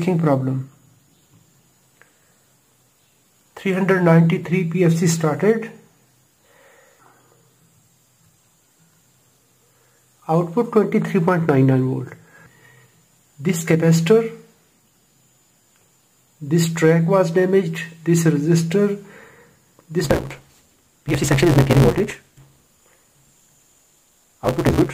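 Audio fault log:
20.04–24.93 s, block size mismatch (truncated): the end of each block is dropped, so audio runs 1.88 times fast at near-normal pitch, with a 172 Hz buzz suggesting 256-sample reads.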